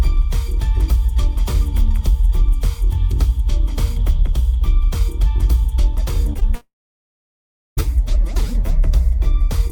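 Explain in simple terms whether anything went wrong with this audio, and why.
Short concealed packet loss at 6.33 s and again at 6.39 s: each time, about 20 milliseconds of audio failed to arrive in time to be played. The receiver covered each gap by stretching what it had just heard into the hole and then easing back into the real audio. Because the gaps are tiny and close together, you hear a quick smear or wobble, and any very short sound there can disappear.

Long network dropout from 6.55 s to 7.79 s: the sound carries on briefly as a fading buzz or hiss, then goes silent for about a second before returning. Roughly 1.2 seconds of audio is simply missing, so whatever happened in that stretch is never heard. This is likely a network interruption. The receiver could only extend the last bit of sound for a moment before it had nothing left to play.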